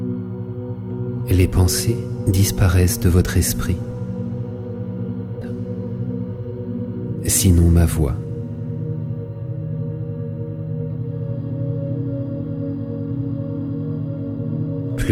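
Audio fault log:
5.41–5.46 s, stream segment skipped. The audio jumps abruptly forward, with a brief blip at the join, and the sound resumes at a later point. This is likely a stream segment that failed to load, so the player dropped it and continued with the next one.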